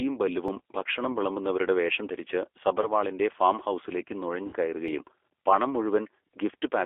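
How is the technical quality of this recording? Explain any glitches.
The recording is a low-bitrate phone-style speech signal with clearly audible coding damage and several short glitches.

The whole clip carries G.729 codec coloration. At 8 kbit/s the codec rebuilds speech from a vocal tract model, a pitch predictor and a few pulses per frame, so the voice sounds rough and slightly synthetic. The band runs only from about 300 Hz to 3.5 kHz, so nothing bright or deep survives. Band-limiting alone would just sound muffled. The grainy, artificial texture is what marks this as coding.

At 1.11 to 1.16 s, 2.81 to 2.87 s and 4.46 to 4.54 s there is VoIP packet loss concealed by the speech codec. The first two gaps are 20 ms each, which fits a single lost packet. The third is 60 ms, which points to about three packets. With data missing, the decoder keeps extending the last pitch and filter at falling gain. 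The result is a short stretched sound that fades, and the voice stays weak briefly after each gap.

At 0.48 s and 4.88 s there are dropped buffers, likely from an overrun. A few milliseconds of audio were overwritten before they could be read, and the two sides were spliced together with no silence between them. Each one is an instant, small jump in the sound. Unlike the concealment glitches, there is no stretched tone and no fading tail.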